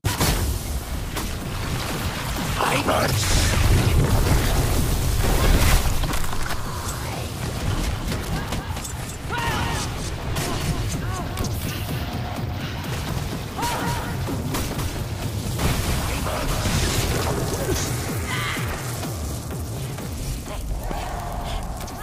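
From 7.66 s to 16.88 s, every sound is followed by a second, dry copy trailing by around 200 ms and about 5 dB quieter, giving a flat, stuttering slapback with no decay or room colour; it cuts in and out abruptly at those times. This doubled audio track is likely the same signal reaching the mix twice, once directly and once through a slower capture path or an out-of-step edited duplicate.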